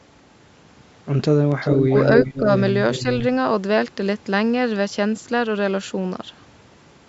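From 1.5 to 1.87 s an echo leak appears. A copy of the speech returns 383 ms late, about as loud as the original. The likely cause is a far-end loudspeaker whose echo canceller let its microphone pickup slip back into the call. From 1.9 to 1.95 s, speech is suppressed in double talk. The level dips by roughly 10 dB for about 50 ms. Both sides were likely talking at once, and the canceller ducked both its own talker and the echo. The echo leak returns from 2.14 to 2.5 s, again 383 ms behind, somewhat quieter than the speech. Inside it, from 2.38 to 2.49 s, a second double-talk dip of around 5 dB lasts about 100 ms. The last echo leak runs from 2.93 to 3.18 s, with the same delay and well below the speech.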